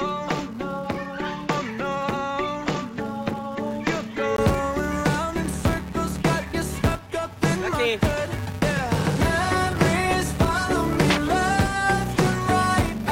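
A steady buzz at 345 Hz runs through the whole recording and rises and falls with the level. That is a filter restarted on every block, resetting its state each time, which fits a 128-sample buffer. For the first 4.38 s the sound is dull and quieter, with faint added background noise. A 20 ms gap follows before fuller sound returns, likely from the input being switched from a poorer device.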